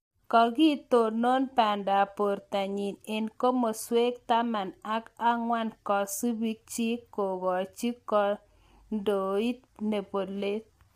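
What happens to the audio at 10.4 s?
At 10.4 s the speech has the same rough, grainy texture it has from start to finish, with noise filling the gaps between harmonics and a thin, synthetic-sounding top end. That's likely low-delay AAC compression (AAC-ELD): its short frames resolve pitch poorly, and the damage fits a bitrate around 32 kbps.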